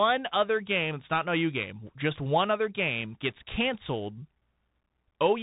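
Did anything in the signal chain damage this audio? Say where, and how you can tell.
Yes, at the codec stage, throughout the speech. This is Bluetooth CVSD headset codec damage. Nothing passes above 3.8 kHz. S sounds turn scratchy, with a granular hiss underneath. One-bit up-or-down steps can't track fast high sounds, which fits a 64 kbps CVSD link.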